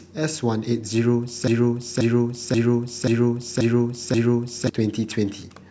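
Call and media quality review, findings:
Broken-record loop, 1.48–4.69 s. One 0.53 s fragment of speech repeats exactly six times, back to back. Likely a stalled player, encoder or stream buffer re-sending its last held fragment. The speech that belonged in that span is lost.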